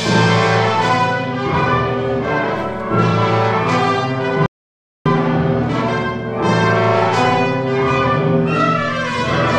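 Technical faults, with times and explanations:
4.46–5.06 s, rebuffering stall: the sound drops to dead silence for about 0.6 s, then picks up exactly where it broke off with nothing skipped. The player exhausted its downloaded audio and halted until more data arrived, which lengthens playback instead of discarding anything.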